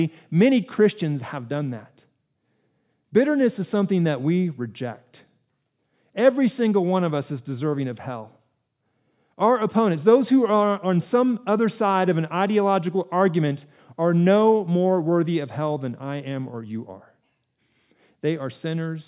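A speech recording with no technical faults to report.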